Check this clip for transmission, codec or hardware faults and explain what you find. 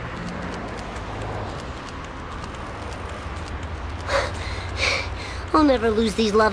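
No transmission, codec or hardware faults turn up in this clip.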